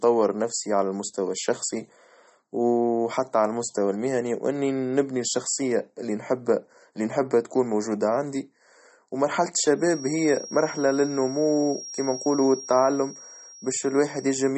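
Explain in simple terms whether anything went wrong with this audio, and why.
Two problems can be heard, one throughout and one near the end.

The whole recording sounds dull and plainly watery, with nothing above about 8.4 kHz. This is likely MP3 compression at a low setting. To save space, the encoder removed the high treble entirely and dropped quieter detail. That detail flickers in and out from moment to moment, so s sounds get a swirly, metallic edge and the start of each sound is smeared.

From 9.73 s to the end, a thin, steady whistle at 5.6 kHz sits behind the speech. It is quiet, well below the voice, and slowly swells and fades in loudness. This is a feedback whistle, likely caused by a loudspeaker's sound reaching the microphone and being amplified again in a loop that is just short of howling. One high pitch keeps ringing without growing louder.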